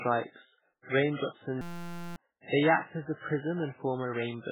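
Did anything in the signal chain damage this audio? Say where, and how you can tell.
Yes. Throughout the speech, nothing is heard above 3.8 kHz. The sound is watery and swirly, with smeared attacks and metallic s sounds. That points to the codec stage. Heavy MP3 compression is the likely cause, at a very low bitrate that drops treble and weak frequency lines.

From 1.61 to 2.16 s, just before "they act as a", a steady buzz replaces the speech. A 5.8 ms slice repeats at 172 Hz. That is a system hang loop at the driver or buffer stage, which fits a 256-sample buffer. About half a second of speech is lost.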